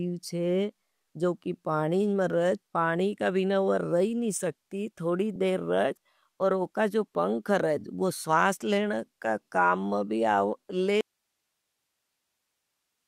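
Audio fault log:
11.01 s to end: audio dropout to a faint residue; the signal was likely lost while the path stayed live, so speech cuts abruptly to hiss about 55 dB down.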